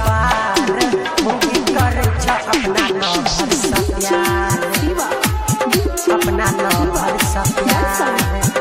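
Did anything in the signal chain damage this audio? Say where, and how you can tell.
No, nothing in the signal chain damaged this audio.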